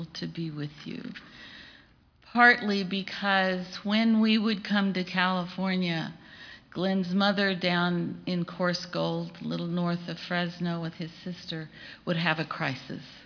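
Nothing here trips any alarm: the audio runs along without a single glitch, dropout or oddity to point to.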